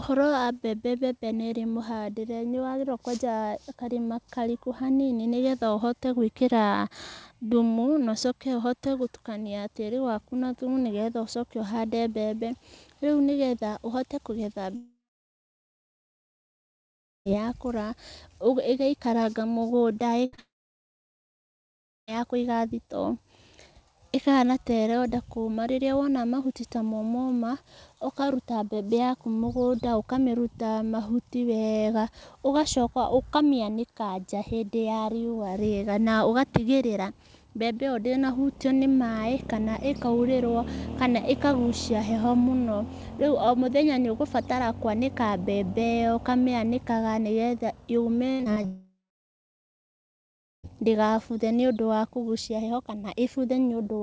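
Speech recorded over a call path whose band stops at 8 kHz, consistent with a 64 kbps G.722 wideband codec, and it has three kinds of packet loss plus three long dropouts. A long network dropout hits at 14.76–17.27 s, 20.40–22.09 s and 48.66–50.65 s. Each time the last sound carries on briefly as a fading buzz or hiss and then gives way to silence, likely because no audio arrived for that stretch. Roughly 2.5 s, 1.7 s and 2.0 s of speech never return. A burst of packet loss at 20.25–20.34 s removes about 80 ms. The receiver stretches the preceding sound and turns it down across the gap, so it turns into a held buzz or fading hiss before the speech resumes further on. Short concealed packet loss follows immediately at 20.34–20.40 s. About 40 ms goes missing and is patched by continuing the prior sound, which leaves a brief smear leading straight into the second dropout. Repeated packet loss (robotic sound) runs from 48.32 to 48.66 s, with five gaps totalling about 140 ms and the longest 75 ms. 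Around 40% of that span is patched, giving a choppy stutter just before the third dropout.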